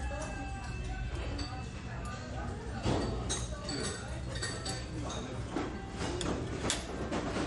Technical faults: MP3 compression

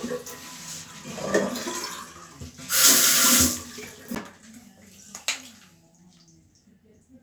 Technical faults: CD skip

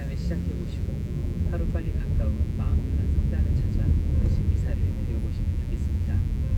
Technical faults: mains buzz

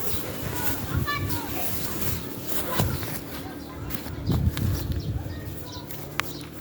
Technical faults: chunks out of order

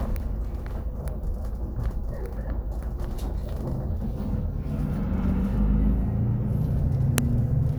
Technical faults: file header played as audio

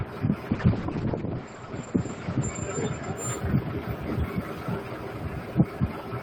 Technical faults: noise suppressor applied to music or sounds; call bitrate drop

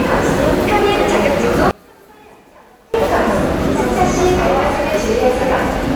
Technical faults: one channel inverted

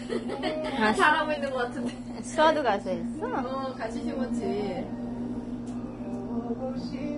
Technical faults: Vorbis compression; drift correction step

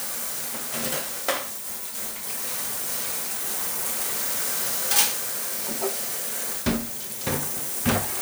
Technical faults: none

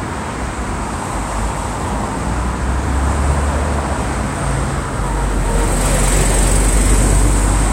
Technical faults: none

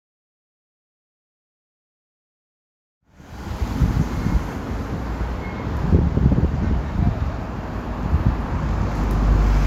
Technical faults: none

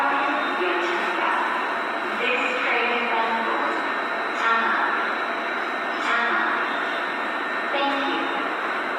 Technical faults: Opus compression

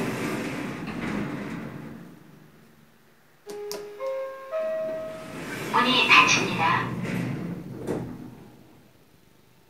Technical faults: none

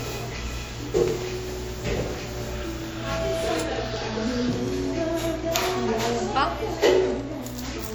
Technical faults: WMA compression

